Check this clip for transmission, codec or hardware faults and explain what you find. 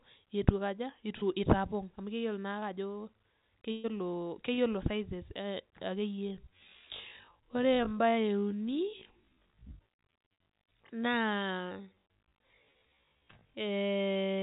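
The clip has three kinds of fault: brief packet losses that the receiver covered over, one longer loss burst, and a slowed-down final section. All of it travels over a call path whose band stops at 4 kHz, which fits narrowband G.711-style coding.

Short concealed packet loss occurs at 1.18 s, 2.59 s and 4.54 s. Each time, a small stretch of the call missed the decoder's deadline: about 40 ms at the first and third points and 20 ms at the second. The receiver invented a replacement by extending the preceding sound and then crossfading back into real audio. Each patch is heard as a quick smear or wobble in the speech, and a short consonant may drop out.

A burst of packet loss runs from 3.72 s to 3.86 s. Several consecutive packets, about 120 ms of audio, never arrived in time. The concealment carried the last sound forward across the whole gap and faded it as it went, with no silent stretch. 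That produces a held buzz or a decaying hiss in place of the speech. The speech then picks up beyond the hole, and the 120 ms in between is simply gone.

The time-stretched section runs from 6.07 s to the end. The audio plays at roughly half speed, about 0.53 times the original rate, while its pitch stays where it was. This is likely the work of software stretching the material to fill a set length, keeping pitch by repeating short slices. The pace drops abruptly at 6.07 s, and the rest sounds drawn out.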